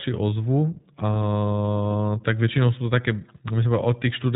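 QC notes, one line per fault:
Throughout, iLBC codec: speech is cut off above 4 kHz and sounds plainly rough and synthetic, as each short frame's excitation is coded independently, consistent with iLBC's 20 ms mode.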